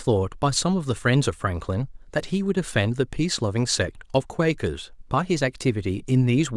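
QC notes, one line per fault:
No faults heard in this speech clip.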